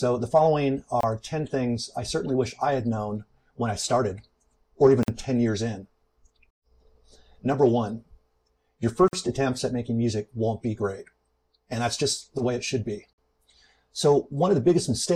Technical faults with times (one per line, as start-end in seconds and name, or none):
1.01-1.03 gap at a join of encoded pieces
5.03-5.08 gap at a join of encoded pieces
9.08-9.13 gap at a join of encoded pieces
13.13-13.18 gap at a join of encoded pieces